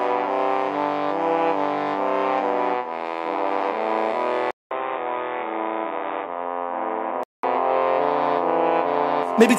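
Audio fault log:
4.51–7.43 s, input switched to a poorer device: after a 200 ms gap, the music drops about 5 dB, loses everything above 3.8 kHz and turns dull and boxy, with a new noise floor sitting roughly 35 dB below it. At 7.43 s the full bandwidth and level return. The narrow band, changed tone and different noise floor point to the recording likely moving to a lower-grade microphone or a headset's call profile and then back.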